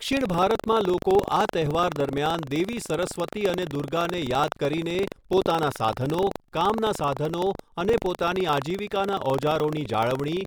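From start to finish, the software writing the playback ring buffer and the hardware reading it have drifted out of step. The two cross inside every period, so in each cycle a small slice, roughly a twentieth of the buffer, is replaced by audio about a tenth of a second old, with hard joins on both sides. This buffer tearing gives the speech a steady robotic buzz at 23.4 Hz, which fits a 2048-sample buffer, and the buzz is heard only while speech is present.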